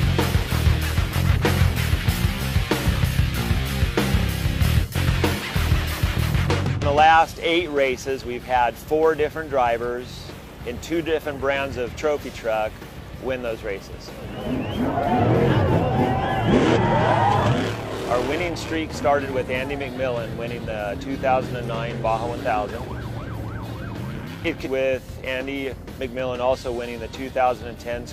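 A short, harsh blip cuts through the sound twice, first from 16.72 to 16.78 s and again from 24.62 to 24.68 s, each lasting about 60 ms. Both are damaged data in a compressed stream: a stretch of the encoded bytes was lost or garbled, so the decoder misread those frames, lost its place, and had to hunt for the next valid frame header before clean playback resumed.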